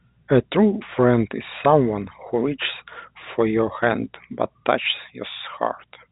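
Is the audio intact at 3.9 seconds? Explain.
No. Loose connector crackle runs from about 3.82 to 3.91 s: a worn contact rapidly makes and breaks, chopping the speech into an irregular scratchy burst. That ragged, uneven texture marks it out from a single clean digital click or a smooth dropout.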